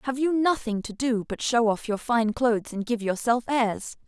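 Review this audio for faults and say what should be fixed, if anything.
Nothing stood out on listening to this speech, so there is nothing here that calls for a fix.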